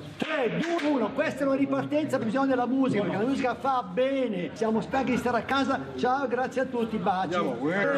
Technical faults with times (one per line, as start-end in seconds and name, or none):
0.77-0.79 compressed frames skipped
2.21 compressed frames skipped
4.55 compressed frames skipped
7.83 compressed frames skipped